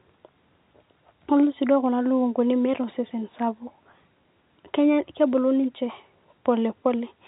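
There are no technical faults to describe in time order in this speech, which comes through the telephone band with nothing above about 3.9 kHz.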